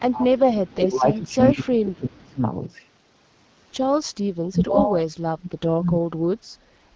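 An echo canceller that likely could not tell this talker apart from the far end's loudspeaker echo held the speech down as speech suppressed in double talk. From 0.0 to 2.41 s the level sinks in pieces for roughly two seconds, dropping by about 30 dB at its worst. From 4.51 to 6.03 s it happens again for around a second, falling by about 35 dB, so the speech dips before recovering.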